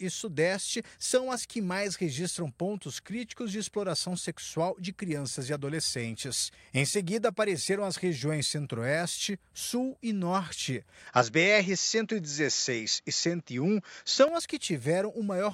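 At 11.07 s the speech suddenly loses its top end and turns duller. Nothing above 7.6 kHz gets through. The level shifts by a few decibels at the same moment, and a faint new background noise appears, well below the speech. There is no gap at the change. The likely cause is an input switched to a poorer device, with a narrower band and its own tone and noise. At 14.28 s the fuller sound returns.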